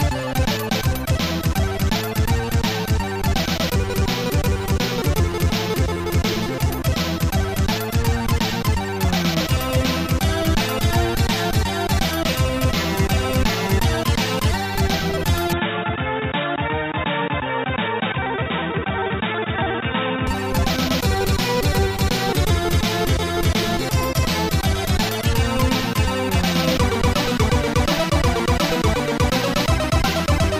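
At 15.53 s the audio abruptly narrows, with nothing above 3.8 kHz, drops a few dB in level and picks up a new, faint noise floor, with no gap at the change; full bandwidth returns at 20.27 s. This points to the input likely switching to a poorer device and back.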